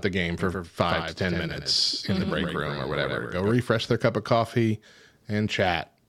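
Likely a second, slower capture path or a misaligned edit produced a doubled audio track from 0.39 s, after "the game", to 3.51 s, before "their cup of coffee". A dry copy trails by about a tenth of a second, about 5 dB quieter, starting and stopping abruptly.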